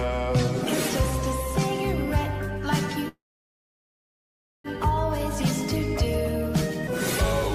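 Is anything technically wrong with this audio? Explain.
Yes. From 3.08 to 4.67 s there is a call audio freeze, likely from packets stalling in transit and draining the jitter buffer. The last sound is briefly extended, then about 1.5 s of silence follows, and the audio resumes exactly where it stopped, running about 1.6 s later.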